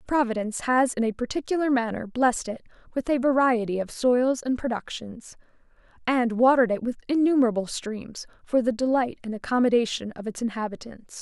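No technical faults are audible anywhere in the recording.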